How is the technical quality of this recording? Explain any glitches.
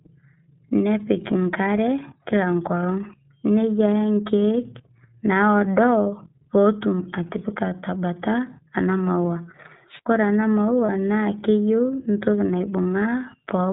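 The technical quality is limited: the speech is coded throughout by a narrowband codec, with two short glitches near the end.

iLBC codec: Across the whole clip the speech sounds slightly rough and synthetic, with nothing above 4 kHz, so a spectrogram shows a hard ceiling there. The plainly audible damage fits iLBC's 13.33 kbps mode with 30 ms frames, each frame's excitation coded independently.

Wireless microphone squelch dropout: From 9.88 to 10.06 s hiss rises as the FM radio link fades, then the receiver's squelch mutes the output for about 70 ms before the speech returns. On a waveform this appears as a near-flat gap preceded by a rise of noise.

Lost iLBC frames: At 10.86 to 10.90 s, just before "na keyieu entoki", 30 ms of audio is concealed, which fits a single lost frame. The decoder repeats the last pitch cycle mixed with noise, giving a brief buzzy held vowel. On a spectrogram, repeated harmonics show there, and the voice is back to normal almost at once.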